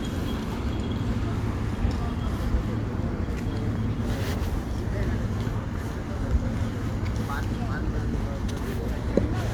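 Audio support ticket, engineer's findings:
Engineer's findings: no fault found in the audio for this ticket.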